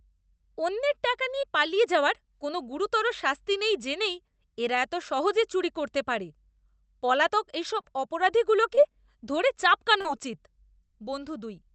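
Five brief smears or wobbles break the speech: at 1.41 to 1.45 s, between "অন্যের টাকা" and "পালিয়ে যাওয়ার কোনও গুরুতর"; at 7.81 to 7.85 s, just after "পলাতক এসব"; at 8.75 to 8.79 s; at 10.01 to 10.07 s; and at 11.05 to 11.09 s. Each is short concealed packet loss. About 20 ms of audio (40 ms at 10.01 s) never arrived in time, so the receiver extended the preceding sound and then blended back into the real signal. The call path's Opus coding limits the top end to about 8 kHz.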